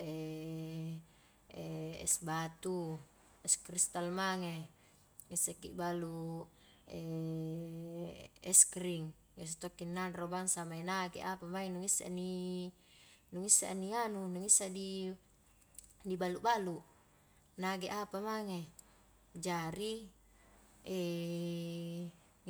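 No technical faults can be heard anywhere in the recording.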